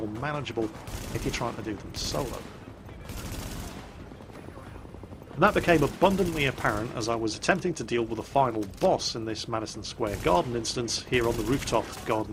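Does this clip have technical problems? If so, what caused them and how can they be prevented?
Yes. At 5.37 s there is a skip ahead: playback jumps forward with no fill, and about a fifth of a second of audio is missing, the two sides butted together almost directly. This happens when a stretch of audio is lost in transit or discarded by an overflowing jitter buffer while later audio is already queued, so the receiver resumes from the newer material. It can be prevented by sizing the jitter buffer to handle bursts and using loss concealment instead of discarding queued audio.

From 7.37 s to 7.98 s there is a jitter buffer speed-up: the sound runs at about 108% of normal speed with unchanged pitch, so it comes across as slightly hurried. The buffer was holding more audio than its target, so the receiver removed short pieces of one or a few pitch periods at a time, trimming roughly 50 ms in total to bring the delay back down. 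It can be prevented by reducing network delay variation, so that delayed packets stop arriving in bunches and the buffer stays near its target depth.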